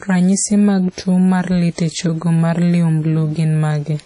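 WMA compression damage runs throughout this speech clip, with plainly audible ringing and a washy, signal-following hiss smeared across each syllable. Nothing sounds above about 10.1 kHz, which fits a likely low-bitrate WMA encode near 32 kbps zeroing weak spectral detail.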